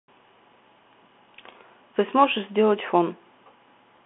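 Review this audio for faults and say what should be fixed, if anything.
The whole clip carries the Bluetooth CVSD headset codec sound: speech is confined to roughly 200 Hz to 3.4 kHz with nothing above 3.8 kHz, and the one-bit delta coder's adapting step leaves scratchy s sounds, slope-overload distortion on loud high content and a granular hiss underneath. Record through a wideband path, such as the headset's mSBC or LC3 mode or a wired microphone, rather than the narrowband CVSD headset link.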